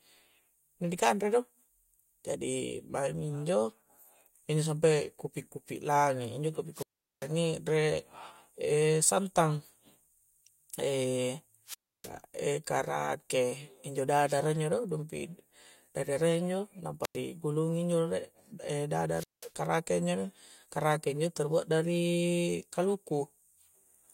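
Wireless microphone squelch dropouts occur at 6.73 to 7.29 s, 11.66 to 12.11 s, 17.02 to 17.17 s and 19.12 to 19.53 s. Each time the FM radio link weakens, hiss swells briefly before the receiver's squelch shuts the output, leaving near silence of 395, 305, 96 and 192 ms respectively. The speech then returns, at the first dropout with "re' e' santang", as the signal recovers and the squelch reopens.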